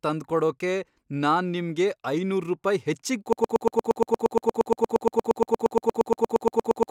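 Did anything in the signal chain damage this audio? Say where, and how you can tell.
Yes. At 3.33 s, right after "ನಿಮ್ಗೆ ಐನೂರ್ ರುಪಾಯಿ ಹೆಚ್ಚಿಗ್", the speech collapses into a broken-record loop. A 117 ms fragment repeats about 31 times to the end. This is likely a stalled playback or stream buffer. A waveform shows identical tiled blocks, and a spectrogram shows vertical stripes at that period.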